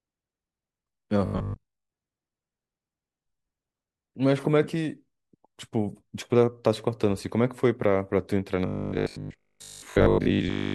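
Speech with robotic sound from repeated short buffers in two stretches, 1.26 to 1.9 s and 8.66 s to the end. In both, the voice collapses into a rigid, metallic buzz pitched at 50 Hz that only loosely tracks the speech. Most of the audio there is replaced by repeats. This is likely the playback software looping the last block while new data arrives too late, and a 50 Hz pitch fits a 20 ms repeat length.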